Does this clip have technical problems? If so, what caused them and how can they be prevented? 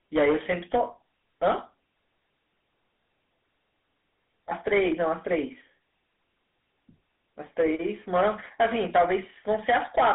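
Yes. From 0.16 to 0.83 s a gain stage was driven about 8 dB past its limit, so the peaks were cut flat. The result is a harsh fuzz on the loud parts of the speech in that span. Setting gain with headroom for the loudest peaks would prevent this hard clipping.

Throughout the clip, the speech was coded as a GSM full-rate codec call, whose sound fits the 13 kbps rate, and passed through a telephone line band of roughly 250 Hz to 3.6 kHz. The coder's coarse pulse excitation makes the voice buzzy and gravelly, and nothing remains above 3.8 kHz. A wideband or modern codec path would avoid this.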